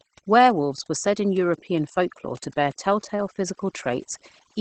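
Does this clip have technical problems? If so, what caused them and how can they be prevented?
Yes. Overdone noise removal, throughout: a noise reducer set too aggressively switches off frequency bands near its noise estimate, taking quiet speech detail with them, leaving near-silent gaps with twinkling specks. Prevent it by using gentler reduction settings and recording in a quieter space.

Opus voice compression, throughout: the encoder's linear-prediction speech mode codes the excitation coarsely at a rate that fits about 12 kbps, with nothing above about 8.7 kHz, so speech sounds muffled, hoarse and slightly robotic. Prevent it by encoding at a higher bitrate.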